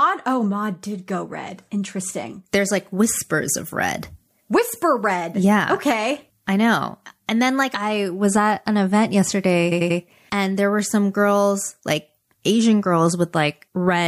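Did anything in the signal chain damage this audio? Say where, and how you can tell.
Yes. After "was at an event", a stutter of repeated frames runs from 9.71 to 9.99 s, before "and there were some". A 92.9 ms block plays three extra times, adding about 0.28 s. The same compressed data was decoded again, which points to a codec or storage fault.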